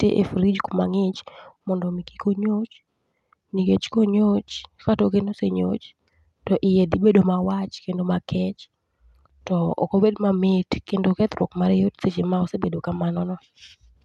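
Speech carried over a WebRTC call path with no technical faults found; the top end rolls off around 12 kHz, which fits an Opus link running at about 64 kbps.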